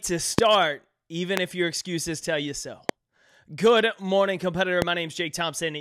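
A speech clip with four loud pops at 0.39, 1.37 (just before "if your excuses tell"), 2.89 (after "excuses tell you so") and 4.82 s. Each is a single sharp 20 ms click, around 20 dB above the speech, which continues underneath. Each is likely a voltage spike from a switch, static or a driver glitch.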